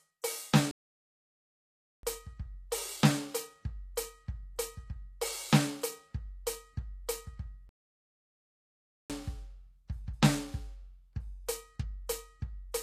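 Throughout, the music carries plainly audible HE-AAC compression damage, likely at a low bitrate around 24 kbps: treble above the coded band is rebuilt from copied lower bands, leaving the treble gritty and metallic. From 0.71 to 2.03 s the output drops to silence for 1.32 s, a playback stall, likely from the player running out of data, before resuming. At 3.96 s a transient is preceded by about 14 ms of pre-echo, where block-spread quantisation noise leaks ahead of the attack as a short hiss and softens it. A second playback stall silences the sound from 7.69 to 9.10 s, lasting 1.41 s.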